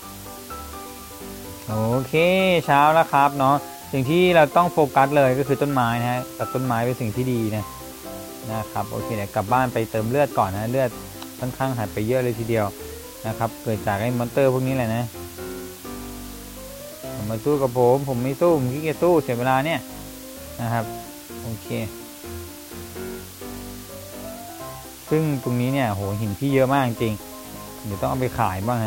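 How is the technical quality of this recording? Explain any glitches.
The recording is marred by a steady hiss from start to finish, caused by low bit depth with dither. The sound appears to be quantized to very few levels, consistent with roughly 7 bits. Dither added before rounding turns the error into even white noise, around 20 dB below the signal, with no distortion. A spectrogram would show a flat, uniform noise floor across all frequencies, and the waveform would look thickened by constant fuzz, even in gaps.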